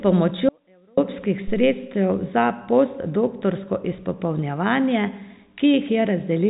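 From 0.49 to 0.97 s the speech drops out for about half a second, leaving only a faint residue roughly 35 dB down, likely a brief signal loss on a live path. At 1.48 s a phantom power thump occurs: a supply switching on or off on the live input sends a deep low-frequency thud that decays within about 77 ms, with the event running to 1.82 s, all heard through band-limited telephone audio.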